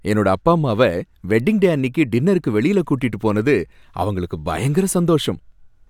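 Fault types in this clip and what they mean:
No fault types are present in this clip.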